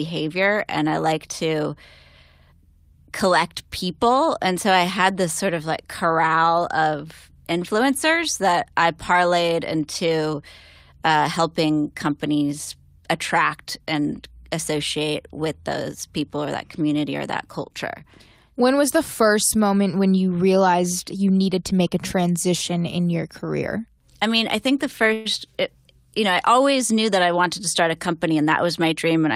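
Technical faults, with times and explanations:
25.13–25.27 s, call audio freeze: the sound stalls for about 0.12 s and the receiver stretches the last fragment into a brief fading buzz or hiss, then the speech resumes exactly where it left off. This is likely a jitter buffer running empty while packets were held up, so nothing is lost but the call falls 118 ms further behind.
27.21–28.93 s, jitter buffer speed-up: the speech runs about 7% faster at unchanged pitch and sounds hurried. With excess audio queued, the receiver snipped out many short pitch-period pieces in succession, trimming roughly a tenth of a second of delay.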